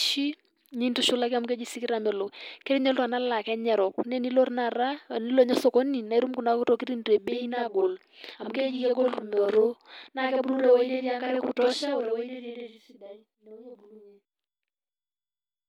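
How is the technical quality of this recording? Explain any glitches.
From 7.28 s to the end, the speech doubles: each sound is followed by a second copy at the same level, heard as a tight slap echo. This is a channel delay (doubling) fault. One channel runs about 46 ms late, which fits a 2048-sample buffer, and summing both channels to mono exposes the late copy as a distinct repeat.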